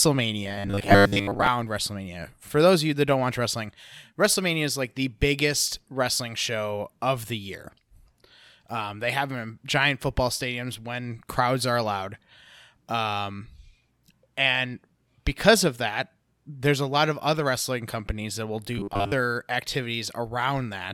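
From 0.43 to 1.47 s, and again from 18.78 to 19.12 s after "wrestling companies that will", the speech turns into a rigid metallic buzz at 100 Hz. This is robotic sound from repeated short buffers, likely caused by audio arriving too seldom. A 10 ms slice repeats, replacing most of the real sound.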